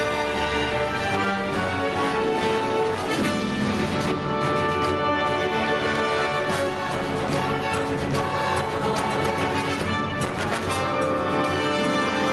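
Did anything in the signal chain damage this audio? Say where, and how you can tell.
Yes. The input gain appears to have been set far too high, most likely at the microphone preamp, so a fast limiter or compressor clamps down on every loud sound. Throughout the clip the gain swings by roughly 10 dB, which is gain pumping. Loud and soft passages sit unnaturally close in level and the sound is squashed. The call codec's top end stops around 12 kHz, consistent with Opus.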